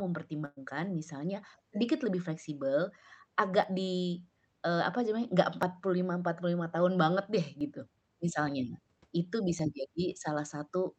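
A speech recording that came through a call path: Opus-style coding with the top end rolled off around 8 kHz, which fits a mid-rate setting of roughly 40 kbps. The first real problem is a burst of packet loss right near the start, from 0.45 to 0.58 s. The receiver had nothing new to play, so for about 111 ms it stretched the last bit of sound, fading it into a held buzz or hiss, then went quiet for about 20 ms. When the audio picks up again, roughly 120 ms of the speech is simply gone, so you hear a jump rather than a pause. The second issue is periodic USB or driver dropouts running from 1.65 s to about 9.59 s, spaced every 1.99 s. Each one is around 10 ms of audio skipped outright, not filled, and there are about five of them. Because the sample stream just jumps ahead, each dropout lands as a small tick or pop, and only when speech is present. That steady spacing is the giveaway that a background task is stalling the bus or the audio driver on a timer.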